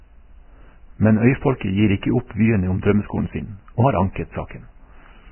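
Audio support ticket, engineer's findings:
Vorbis compression, whole clip. Speech band-limited, nothing above 3 kHz; sibilants dulled, treble hissy and grainy, consonant onsets smeared. Likely cause: heavy Vorbis encoding, consistent with a very low bitrate near 10 kbps. Encoder dropped cut-off to 3 kHz and quantised remaining upper residue so coarsely that fine detail turned into noise-like grain at similar energy, roughening tones and blurring attacks.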